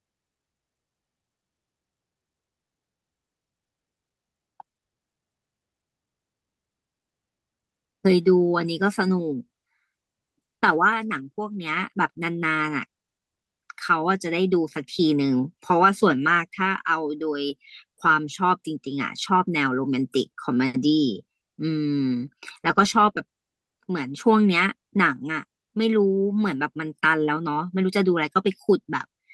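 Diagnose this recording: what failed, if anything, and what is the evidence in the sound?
Nothing failed at any stage: the speech runs without a dropout, click, distortion or level fault anywhere in the chain.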